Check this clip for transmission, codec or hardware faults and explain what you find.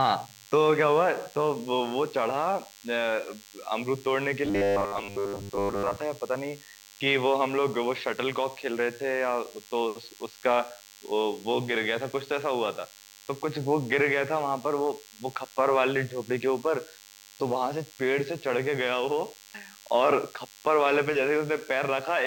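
Two faults are present in this speech clip.

DECT cordless phone buzz, throughout: radio bursts every 10 ms are rectified by the audio circuit, leaving a thin, harmonic-rich 100 Hz buzz roughly 25 dB below the speech.

Robotic sound from repeated short buffers, 4.45 to 5.96 s: the speech turns rigid and metallic with a fixed 100 Hz buzz, likely because audio arrived too seldom and about 10 ms segments were looped while most of the real audio was skipped.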